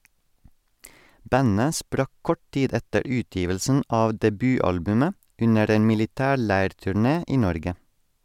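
No technical faults can be heard in this recording.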